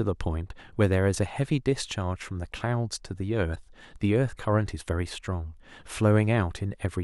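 A short glitch breaks into this speech recording between 3.52 and 3.57 s, lasting roughly 56 ms. It is the signature of damaged data in a compressed stream. Some of the encoded bytes in that stretch are wrong, so the decoder either misreads the affected frames or discards them and loses sync. It then scans forward for the next valid frame header before playback recovers, and that brief misdecoded interval comes through as the glitch.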